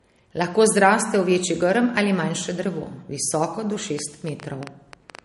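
From the start the speech sounds dull, with nothing above 11.2 kHz and the leftover artefacts of heavy MP3 coding. This is low-bitrate audio saved at a high bitrate: the sound was most likely first squeezed through a low-rate MP3 encode, one that fits something around 48 kbit/s, and then re-encoded at a much higher rate. The larger file keeps the earlier damage and cut-off but cannot bring back what was discarded.

At 3.99 s, right after "manjše drevo visoko do", a train of clicks begins and runs to 5.20 s. About ten sharp, similar ticks arrive at around 7.5 per second but at an uneven pace, poking a little above the speech level and sounding in the gaps too. Pulses like these likely come from electrical interference or a faulty connection or power supply injecting brief spikes into the signal.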